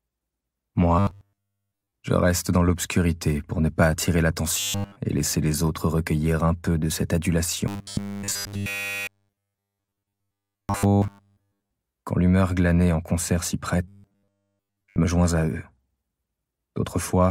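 Robotic sound from repeated short buffers at 0.99–1.92, 4.60–4.96, 7.68–11.70 and 13.88–14.96 s: a rigid 100 Hz buzz, likely from one 10 ms buffer looping while new audio is skipped. Waveforms show identical 10 ms cycles, and spectrograms show evenly spaced harmonic lines.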